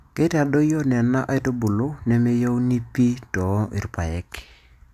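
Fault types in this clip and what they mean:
Nothing stood out on listening to this speech recording.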